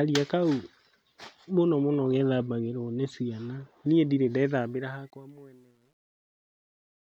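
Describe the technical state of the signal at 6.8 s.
At 6.8 s the fade-out after "nĩ ciana niĩ ndirĩ" has truncation distortion on a fade (4.54 to 7.02 s, worst from 5.28 s). Undithered level steps, consistent with roughly 10-bit resolution, turn the waveform into blocky stairs, which sound gritty and show as broadband hash on a spectrogram.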